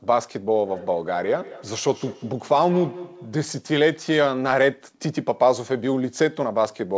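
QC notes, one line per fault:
0.55–3.5 s, feedback echo between two devices: each syllable comes back roughly every fifth of a second, repeating as a thinner, ringing copy that peaks at about 17 dB below the speech. The spacing stays fixed, which points to a second device in the room replaying this talker's audio into an open microphone. Echo cancellation only removes what its own device plays, so that loop goes unchecked. The band-limited call audio, with nothing above 8 kHz, fits a wideband codec such as G.722.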